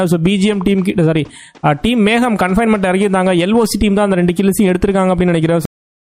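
At 5.65 s the audio has a cut-off end. The sound is chopped off mid-stream rather than finishing, as if the last chunks of audio never got written out or played. There's no tail or natural decay at all; it just falls straight into flat digital silence, and that dead air runs for the final half second or so until the file ends at about 6.1 s.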